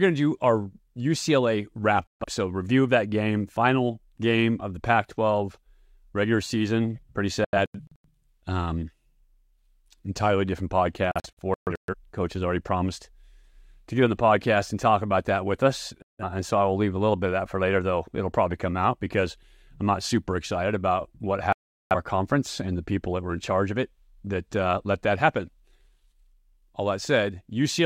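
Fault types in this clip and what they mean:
Digital broadcast dropout: the speech abruptly cuts to silence five times, in three single gaps of 0.16 to 0.43 s and two bursts of short holes spread over 0.6 and 0.8 s, as the receiver muted on lost or corrupted frames.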